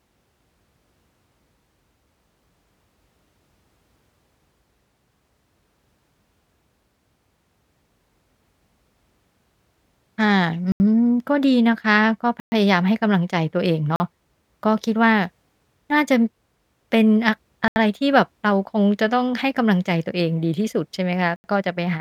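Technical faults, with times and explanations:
10.72 to 21.44 s: block of digital silence, five dropouts at 10.72 s (80 ms), 12.4 s (120 ms), 13.96 s (40 ms), 17.68 s (80 ms) and 21.36 s (80 ms). The speech drops abruptly to silence and then resumes with no fade, so each gap is heard as a brief hole. Every length is a multiple of 40 ms, which points to whole processing blocks of about that size being left empty.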